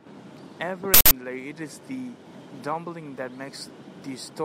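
An uninitialised buffer plays from 0.94 to 1.11 s: a block of memory reached the output before any speech was written into it, so stale leftover values came out as a loud burst of digital noise lasting about 171 ms, which fits an 8192-sample block.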